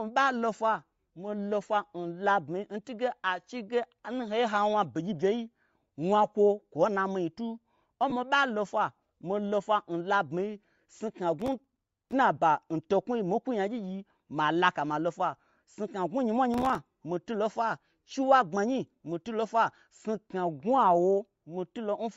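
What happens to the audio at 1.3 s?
At 1.3 s, as throughout, the speech has likely passed through low-bitrate Bluetooth LC3 compression, whose zeroed, noise-filled upper band gives a plainly breathy, grainy edge.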